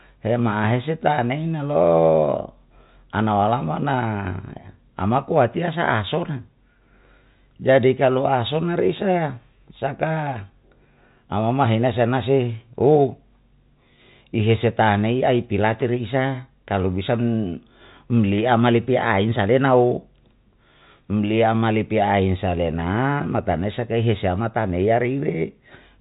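No technical faults can be heard in this speech recording. It carries the narrow band of G.711 telephone coding, with nothing above 3.8 kHz.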